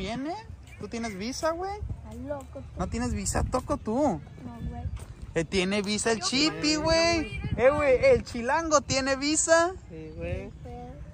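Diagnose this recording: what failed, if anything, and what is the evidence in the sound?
Driver or buffer stage: a repeated buffer at 6.41 s plays one 2.9 ms piece three times, which fits a 128-sample buffer. It is heard as a click or brief buzz, not a dropout's gap.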